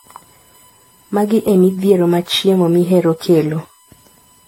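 Throughout the clip, current drawn by the USB bus in its 1 ms frames leaks into the audio through the power or ground path. The result is USB whine, a steady fixed-pitch tone at 1 kHz with its harmonics, loudest at 8 kHz, sitting roughly 35 dB below the speech.

Also running the full length is a swirly, hollow, smeared quality, with blurred consonant attacks and nothing above 16.6 kHz. The likely cause is generation loss: the speech was repeatedly decoded and re-encoded with a lossy codec, which fits around seven passes of AAC-LC at 64 kbit/s.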